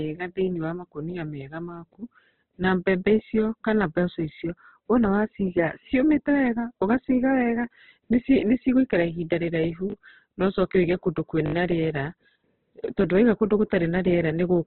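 Heavy low-bitrate Opus compression, likely near 12 kbps, runs through the whole speech recording, leaving nothing above 4.3 kHz and making it muffled, grainy and rough throughout. Late audio made the playback device repeat its last buffer: at 9.90 to 9.94 s a short slice plays three times, and at 11.46 to 11.54 s it plays five times, each with hard joins heard as a short stutter. The repeat length fits a 20 ms buffer.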